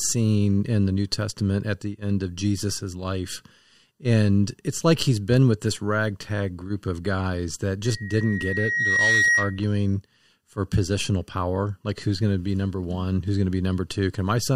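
Just after "group of guys that", at 7.84 s, loudspeaker feedback squeal appears: the microphone picks up its own loudspeaker, and loop gain exceeds one near 1.9 kHz. A pure tone swells over about a second and a half, peaking around 5 dB above the speech, until 9.65 s.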